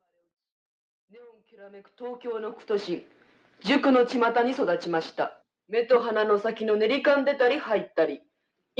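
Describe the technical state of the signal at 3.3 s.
At 3.3 s the signal is intact, with no dropout, distortion, click or other fault audible at that point.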